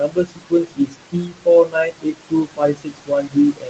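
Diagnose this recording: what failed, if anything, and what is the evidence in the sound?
The call processing stage is where it goes wrong. The noise suppressor is pulling the background down by about 21 dB frame by frame, so the noise ducks in the gaps and swells back under the speech. That leaves a pumping residue through the whole recording.

The same suppressor is also eating speech. From 0.0 to 1.48 s, and again from 1.64 s to the end, soft consonants and word tails get mistaken for noise and drop by up to about 22 dB. In the first stretch that's roughly a second of swallowed, faint sound.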